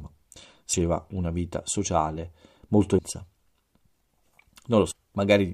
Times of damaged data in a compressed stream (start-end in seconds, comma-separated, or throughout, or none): 2.97, 4.90-4.92